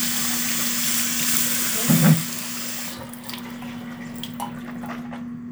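No technical faults are audible.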